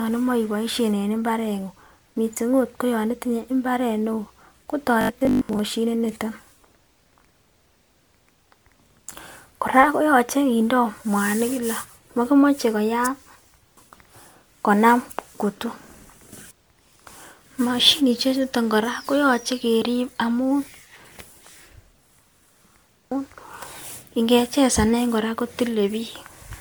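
Speech recorded and shared here shows generation loss, likely from decoding and re-encoding through MP3 at 128 kbit/s about five times, leaving a swirly, hollow, smeared quality with softened attacks. From 5.01 to 5.61 s, the playback software likely ran short of fresh audio and repeated roughly half of it in buffers that fit 20 ms, producing robotic sound from repeated short buffers: a rigid, metallic 50 Hz buzz.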